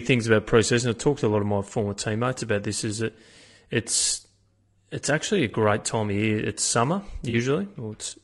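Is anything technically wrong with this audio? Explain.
Yes. Low-delay AAC compression runs throughout: the speech sounds rough and grainy with a noisy upper band, likely from AAC-ELD's short frames resolving harmonics poorly at a bitrate that sounds around 32 kbps.

AAC frame loss with concealment occurs at 5.51–5.54 s and 7.29–7.35 s. The decoder patched the missing audio from the preceding spectrum, leaving brief smeared, noisy patches that fit one and then two lost frames.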